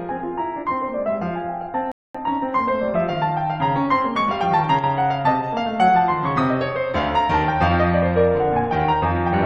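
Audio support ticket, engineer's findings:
Rebuffering stall, 1.92–2.15 s: music cuts to silence, then resumes exactly where it stopped. Player buffer ran dry; about 0.23 s added, nothing lost.

4.79–4.84 s: abrupt 50 ms dip of about 6 dB in the mono sum. Likely one channel drops out briefly, leaving only the remaining channel's share.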